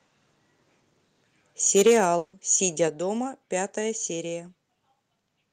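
A speech recording with three problems. From 1.66 to 2.04 s the loudest syllables sound harsh and crackly. This is microphone overload, likely from input gain set about 6 dB too high, flattening around one sample in twenty. Between 2.17 and 2.35 s a long network dropout occurs. About 160 ms of audio is lost, replaced by a fading continuation of the last sound rather than silence. At 2.88 s the microphone volume is stepped down. Speech and background both fall abruptly by about 5 dB, likely the call software reducing input gain after the earlier clipping.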